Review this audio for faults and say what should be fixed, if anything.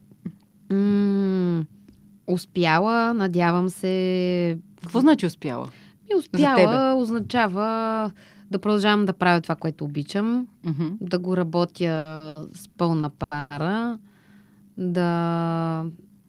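Between 11.95 and 13.52 s, packets reached the receiver late or slower than playback consumed them, so the jitter buffer kept running dry. That produces repeated stalls (stutter): eight short gaps, the longest about 110 ms, each bridged by stretching the last sound, with the longer ones faded. Around 450 ms is filled this way, nearly a third of that stretch, so nothing is lost, but the speech drags and hiccups. An adaptive jitter buffer with more headroom, plus steadier network pacing, would prevent it.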